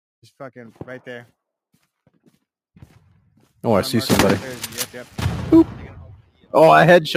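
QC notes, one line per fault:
6.15–6.53 s, sound cut by the noise suppressor: the suppressor misread this passage as noise and pulled it down by up to about 18 dB, so it sinks in level.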